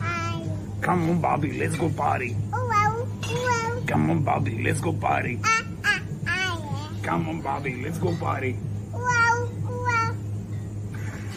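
At 3.33 s and again at 5.39 s there is a single sharp click, each too brief to take away any audible sound. The likely cause is dropped samples: a handful of samples, around a tenth of a millisecond, go missing, so the waveform leaps straight from one value to a later one instead of moving smoothly. On a waveform each shows as a small step discontinuity, and on a spectrogram as a thin vertical line running across all frequencies.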